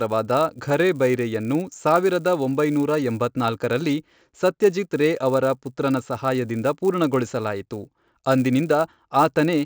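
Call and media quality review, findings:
Steady 100 Hz buzz riding on the speech throughout, silent in pauses. Resampler restarted on every block: 16 to 48 kHz conversion per 10 ms block, edge errors each block.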